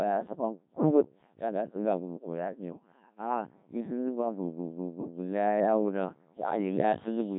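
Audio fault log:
throughout Codec 2 vocoder: heavily robotic, buzzy speech with nothing above 3.8 kHz, resynthesised from sine waves using only pitch, voicing, energy and envelope, which fits a 1.3 kbit/s stream.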